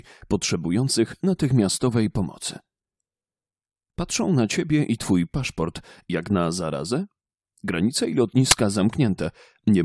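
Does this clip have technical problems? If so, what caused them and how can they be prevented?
Yes. At 8.51 s there's a very short, hard-edged burst of very loud white noise, classic file tags played as audio. What's happening is that the player read a chunk of embedded metadata, here the compressed cover picture, as if it were sample data. Because compressed image bytes look essentially random, they come out as loud static with abrupt edges. To prevent it, strip or correctly place the tags and use a decoder that skips metadata blocks.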